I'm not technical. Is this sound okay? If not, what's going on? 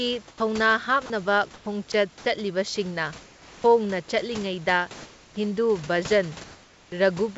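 No. There are two related problems, both typical of a phone or internet call.

The first is sound dropped by the voice detector. At 0.28 to 0.40 s, 1.06 to 1.10 s, 1.92 s and 2.18 to 2.26 s, short pieces of the speech vanish and a flat hiss fills the gap. The call system likely mistook quiet bits of speech for background and briefly stopped sending. Unlike the second problem, actual speech is lost here.

The second is comfort noise in place of the background. At 1.54 to 1.66 s and 3.22 to 3.64 s, nobody is talking, and the natural room noise is swapped for a smoother, featureless hiss that is quieter. The system likely paused sending during silence and filled the gap with artificial noise. No speech goes missing. You just hear the background briefly change character and then return.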